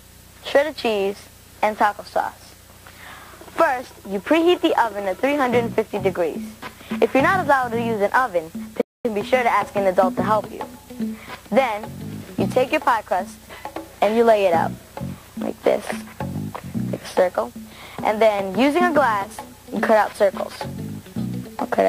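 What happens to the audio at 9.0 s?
The sound cuts out mid-flow at 8.81 s and stays silent until 9.05 s, a gap of about 234 ms, so 9.0 s falls inside the dropout before the audio picks up again. This is a playback stall. The likely cause is that the player briefly ran short of data to play, or its playback thread was held up, so nothing reached the output until it recovered and resumed.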